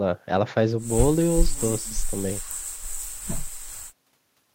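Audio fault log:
No faults are audible in this speech recording.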